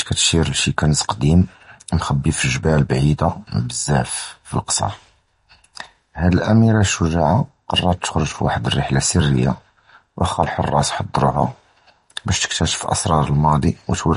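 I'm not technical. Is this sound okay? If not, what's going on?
No. Across the whole recording the speech has a watery, swirly quality, and the crisp top end is missing entirely, with nothing above 10.5 kHz, so s sounds come out dull and metallic. The likely cause is heavy MP3 compression. To save space, the encoder threw away the highest frequencies outright and kept only the sound it judged most important, so quieter details flicker in and out from moment to moment.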